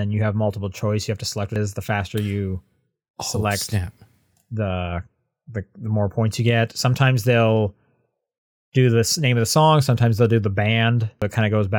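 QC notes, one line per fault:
1.56 s and 11.22 s: damaged data in a compressed stream. Brief glitch right after "have to select" and again near the end, where corrupted frames made the decoder lose sync and hunt for the next frame header.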